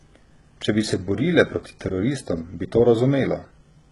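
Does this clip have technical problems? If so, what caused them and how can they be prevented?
Yes. Throughout the clip, the speech was likely squeezed through HE-AAC compression at a very low bitrate, with damage that fits something around 12 kbps. Only the lower band is coded directly, and the treble is synthesised by copying lower bands upward under a coarse envelope. The result is heavy: the top of the spectrum sounds artificial, s sounds come out gritty and lispy, and nothing remains above 11.1 kHz. Encoding at a higher bitrate, or with plain AAC instead of band replication, would prevent this.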